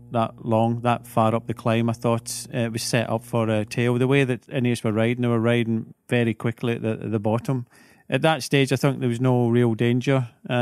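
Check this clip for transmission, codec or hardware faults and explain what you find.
Two faults are audible in this speech clip: mains hum at the start and a single repeated buffer within it.

Mains hum runs from 0.00 s to 4.24 s. A ground loop or a nearby transformer is leaking the 60 Hz power line into the signal path, so a steady low tone sits under the speech at about 25 dB below it, with some low harmonics. It stops at 4.24 s.

A repeated buffer occurs at 1.05 s. New audio missed its deadline, so the device replayed the previous 2.67 ms block once more, which fits a 128-sample buffer. Because the block is so short, the repeat is heard not as a stutter but as a brief click with a hard join on each side. About 3 ms of the incoming audio is lost.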